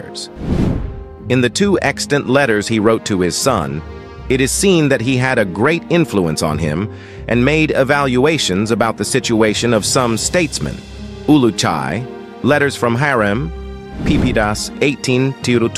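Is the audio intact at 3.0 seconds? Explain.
Yes, the audio is intact at 3.0 seconds, with no fault audible at that moment.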